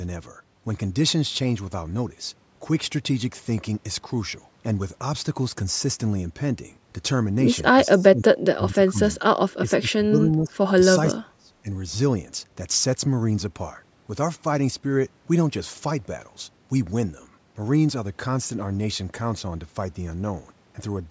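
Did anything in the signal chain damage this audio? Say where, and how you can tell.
Yes. The speech dips in three stretches, from 7.87 to 9.28 s, 9.58 to 10.76 s and 11.14 to 11.69 s, falling by about 20 to 25 dB at its lowest. This points to the call processing stage, most likely speech suppressed in double talk. The echo canceller apparently could not tell this talker from loudspeaker echo while both sides spoke at once, so it turned the near-end voice down.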